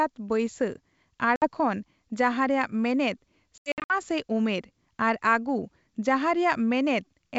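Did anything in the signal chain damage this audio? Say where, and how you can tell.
Yes, the damage happens on the network, as packet loss on an ADPCM call. At 1.36 to 1.48 s about 60 ms of speech drops to hard-edged silence, roughly three packets. From 3.58 to 3.94 s about 220 ms goes missing in scattered holes over some 320 ms, the longest run 80 ms. After each hole the speech comes back slightly distorted and settles within tens of milliseconds. That recovery tells it apart from a buffer underrun. The decoder's adaptive predictor and step size have drifted from the sender's and need time to re-converge. The G.722 wideband coding itself shows no more than faint codec damage.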